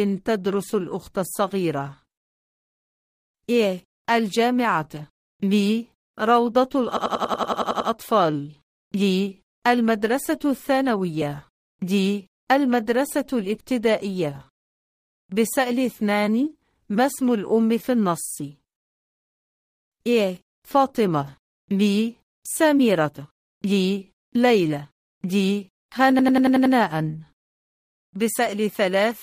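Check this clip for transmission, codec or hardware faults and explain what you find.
Two bursts of a system hang loop. From 6.97 to 7.90 s and from 26.19 to 26.75 s, a rapid machine-gun stutter repeats one 92.9 ms fragment about 10.8 times per second, ten times and then six. The system froze while the hardware kept replaying its ring buffer, which fits a 4096-sample buffer.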